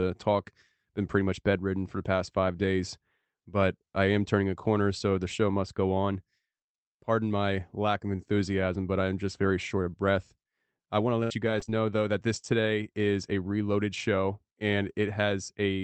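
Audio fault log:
11.19–12.45 s, repeated packet loss (robotic sound): between "breath I want to" and "is a reloaded show" the speech turns choppy. Four separate gaps, the longest 66 ms, were patched by extending the preceding sound, so the speech stutters and clipped fragments alternate with smeared filler.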